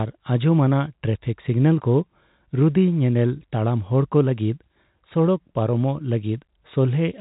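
The speech comes through a telephone-style G.711 path that is working as it should, its sound limited to below 4 kHz with only the faint level-following hiss of that coding beneath it, and nothing further disturbs the signal.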